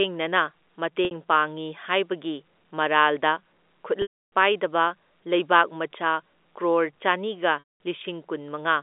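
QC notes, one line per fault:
1.05–1.11 s, packet loss with pitch repetition: a 60 ms gap bridged by repeating the last pitch period, so the sound briefly holds and buzzes rather than clicking or muting.
4.02–4.25 s, packet loss with pitch repetition: 300 ms lost. The repeated pitch period fades out into silence, then speech cross-fades back in, unlike an abrupt hard dropout.
7.59–7.62 s, packet loss with pitch repetition: 210 ms lost. It gives a held, buzzy tone that fades away, a concealed gap rather than a stutter of repeated syllables, heard through the narrow telephone band.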